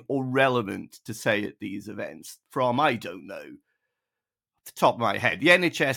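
From 0.13 to 5.96 s, clock slip clicks run through the speech as a fast, soft rattle of single-sample ticks about every 30 ms, likely from two unsynchronised clocks differing by roughly 700 ppm. Unlike random digital clicks, they stay evenly spaced and fade in silence.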